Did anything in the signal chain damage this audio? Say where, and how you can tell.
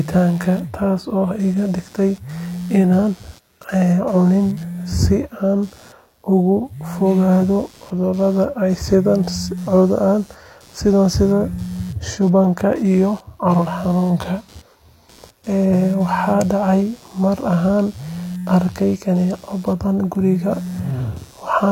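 Yes, in the analogue wiring. Computer activity noise runs through the whole clip. A buzzy, pulsing sound sits roughly 30 dB below the speech, repeating about 100 times per second. It ignores the speech itself. Computer load is disturbing the shared audio ground.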